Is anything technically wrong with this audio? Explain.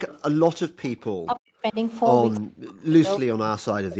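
Yes. The speech passes through an echo canceller that struggles in several places.

Echo leak, from 0.08 to 0.22 s and again around 2.35 to 2.40 s: the canceller on a loudspeaker end likely failed to remove all of its microphone pickup, so a delayed copy returns about 307 ms late, roughly 25 dB below the speech, as a faint repeat.

Background gated by the echo canceller, from 0.69 to 0.81 s: while the loudspeaker played, the canceller pulled the microphone down hard, by about 40 dB at its deepest, so the room sound briefly vanishes for around a tenth of a second before returning.

Speech suppressed in double talk, from 1.26 to 1.77 s and from 2.39 s to the end: with both sides talking, the canceller likely could not tell the local talker from the echo and attenuated everything, so the speech dips by up to roughly 40 dB, losing level. The call microphone processing, which passes nothing above 8 kHz, is normal.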